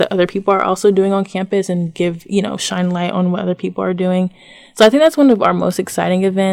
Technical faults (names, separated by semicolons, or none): hard clipping